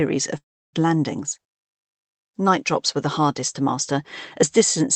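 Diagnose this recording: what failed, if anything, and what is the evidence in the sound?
At 0.37 s the sound smears into a fading buzz, then silence until 0.76 s, resuming with the gap lost. This is likely a long network dropout rather than a hard mute.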